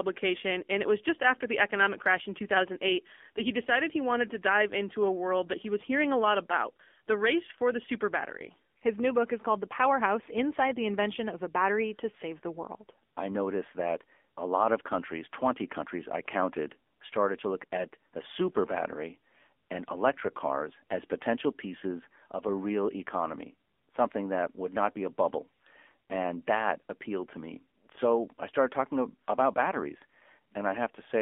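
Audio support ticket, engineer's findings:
Speech path encoded with AMR narrowband mobile codec, full clip. Narrowband sampling plus line band 250 Hz to 3.5 kHz: thin, boxy, no top end. Plainly audible codec damage: buzzy, synthetic pulse-excited voice, consistent with a low-rate mode near 7.4 kbps.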